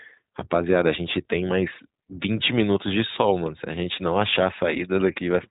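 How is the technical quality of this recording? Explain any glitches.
The recording is clearly degraded by low-bitrate voice coding across all of its roughly 5.5 seconds of speech. iLBC codec damage runs throughout: the speech is squeezed into the narrowband range and rebuilt frame by frame, with an excitation pattern that fits 20 ms frames at about 15.2 kbps. Each frame's excitation is coded independently, which leaves the speech plainly rough and synthetic-sounding. On a spectrogram, energy stops sharply at 4 kHz, with nothing above it.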